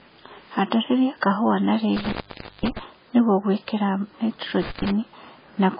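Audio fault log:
throughout: MP3 compression. Nothing is heard above 5 kHz, and the remaining band sounds watery and swirly, likely from a heavily starved encoder near 16 kbps.
1.96–2.79 s and 4.62–4.91 s: intermittent contact. The line opens after "kahũa na" for about 510 ms, then again for about 118 ms, with crackle at each edge.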